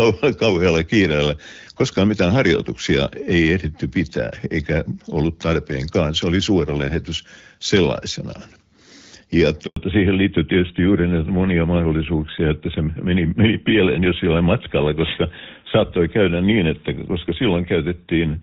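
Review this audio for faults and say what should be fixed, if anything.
A handover gap cuts the speech from 9.66 to 9.76 s. The sound dies away quickly and stays silent for 100 ms. No speech frames arrived while the call switched networks, so that stretch of speech is lost. Make-before-break handover, or better coverage at the boundary, would prevent it.

Fallback to narrowband starts at 9.76 s and lasts to the end. Before it, the HD Voice path sounds clear, which fits AMR-WB at 12.65 kbit/s. After it, nothing remains above 4 kHz. The speech turns duller and rougher, which points to GSM full rate. Ensuring the target network supports AMR-WB would keep the call in HD Voice.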